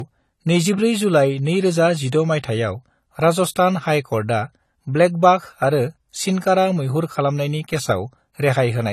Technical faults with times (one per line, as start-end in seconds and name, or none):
0.00-8.93 low-bitrate audio saved at a high bitrate